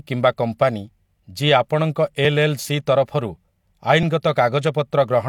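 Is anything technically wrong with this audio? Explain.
Yes. At 2.25 s and 4.03 s the speech jumps ahead, losing about 5 ms and about 15 ms respectively, which is likely a dropped buffer (overrun). Samples went uncollected and were overwritten, so the surrounding audio is butted together with no gap. On the waveform each join appears as an abrupt break in the cycle shape.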